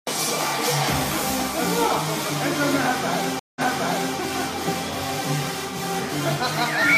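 Around 3.39 s the audio drops out for about 164 ms, then picks up again from a point roughly 0.6 s earlier, so you hear a short stretch a second time, with the disturbance settling by about 4.16 s. That's a classic stream reconnect: the connection broke, the player went quiet, reconnected and spun up a fresh decoder mid-stream, and the server's resent burst put playback back a little before where it dropped.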